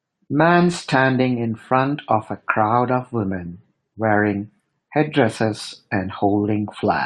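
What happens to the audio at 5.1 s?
Nothing goes wrong at 5.1 s: the speech there plays through intact, with no fault to be heard at that moment.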